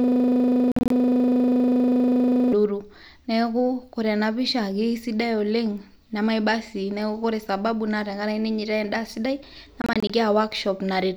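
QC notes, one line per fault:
0.00–2.53 s, system hang loop: the clip opens with the loop already running. A single 40 ms slice of audio repeats exactly, about 62 times, giving a rough 25 Hz buzz in place of the speech. The playback side froze while the hardware kept replaying the same buffer. On a waveform, identical 40 ms blocks tile end to end. A spectrogram shows vertical striping every 40 ms and a comb of harmonics spaced 25 Hz apart.
0.72–0.91 s and 9.82–10.10 s, Bluetooth dropout: each span loses about 116 ms of sound in several short holes spread over about 186 ms and 279 ms. The longest holes are 46 ms and 23 ms. The sound cuts out and resumes further along, as if it had kept playing. The first span falls inside the hang loop. The gaps come in steps of about 23 ms, which points to whole packets missing, likely Bluetooth packets arriving too late. The waveform shows near-silent notches, and the spectrogram shows thin blank vertical bands across all frequencies.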